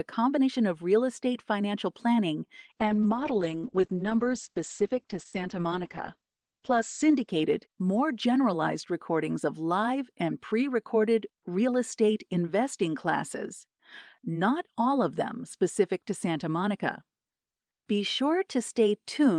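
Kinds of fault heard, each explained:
Call bitrate drop: after "real estate financial planning", at 2.7 s, the encoder's bitrate falls from 32 to 9 kbps, and for about 3.3 s it sits at that floor. The speech turns coarse and watery, and the top end closes in from 20 kHz to 8 kHz, so it sounds muffled. Unlike a fixed low-pass filter, the roughness and dulling ease back as bits return, clearing by 9.59 s before "live and pre recorded".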